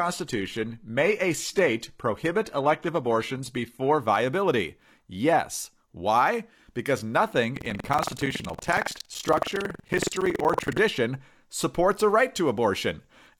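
From 0.0 to 4.0 s the adaptive stream starts at a low bitrate. The treble is thin and synthetic and codec artefacts are stronger, which fits a low-rate HE-AAC version. Quality then jumps without a gap.

Between 7.52 and 10.80 s buffer tearing sets in. Writer and reader cross inside each period, so roughly a sixth of every buffer replays audio about a tenth of a second old. The result is a robotic 21.5 Hz rattle on the speech, which fits a 2048-sample buffer.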